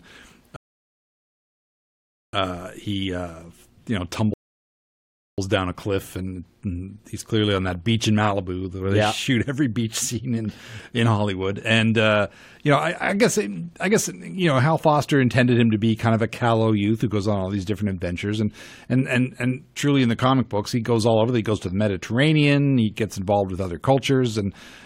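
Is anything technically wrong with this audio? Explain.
Yes. Two rebuffering stalls occur, from 0.56 to 2.33 s (about 1.77 s added) and from 4.34 to 5.38 s (about 1.04 s added). The player ran out of downloaded audio and paused until more arrived, so the speech falls silent and then picks up exactly where it stopped. Unlike a dropout, nothing is skipped; only time is added.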